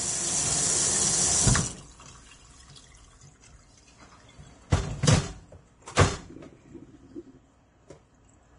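Throughout, nothing survives above 10.6 kHz, and the remaining treble is hissy and grainy, with roughened tones and smeared attacks, likely heavy Vorbis compression at a bitrate around 30 kbps.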